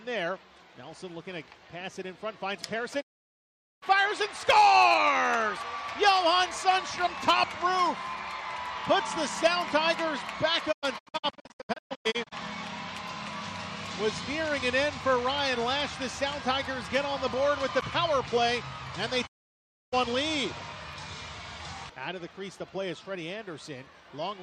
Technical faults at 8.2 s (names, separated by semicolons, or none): none